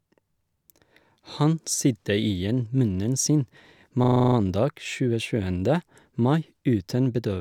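Speech with a system hang loop from 4.04 to 4.36 s. The system stalled while the sound hardware kept replaying its buffer. A 40 ms slice repeats exactly, giving a rapid 25 Hz stutter.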